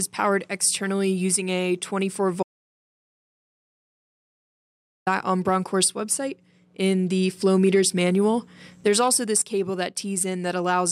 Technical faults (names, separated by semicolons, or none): audio dropout to silence